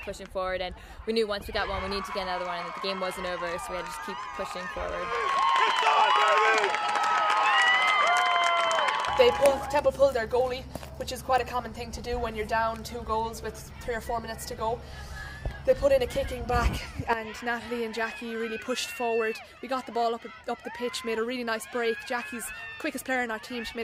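No technical faults are audible anywhere in the recording.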